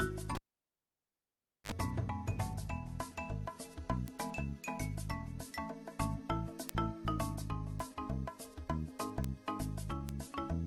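A pop at 0.35 s drops the sound to near silence for about 1.3 s, then a 48 ms burst of 50 Hz mains buzz and a second pop at 1.72 s: a cable pulled and plugged in, its tip briefly touching before seating. Sharp, broadband ticks at 4.08, 6.69, 7.80, 9.24 and 10.09 s, peaking at about −22, −10, −28, −16 and −22 dBFS, are bit error spikes, single flipped bits (two samples at 10.09 s).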